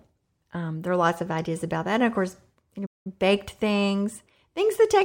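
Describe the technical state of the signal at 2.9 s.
At 2.9 s the speech cuts to silence after "of course you" and stays silent for 193 ms, from 2.86 to 3.07 s, before resuming with "baked things". This is a playback stall, likely the player running out of data or being blocked.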